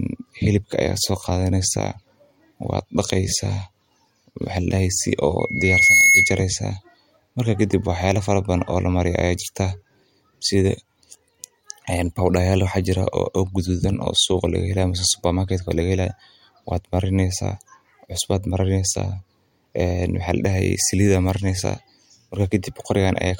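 Speech clip with a burst of loudspeaker feedback squeal from 5.39 to 6.45 s: a 2.2 kHz tone swells over about half a second to roughly 10 dB above the voice, as the mic re-amplifies its own loudspeaker.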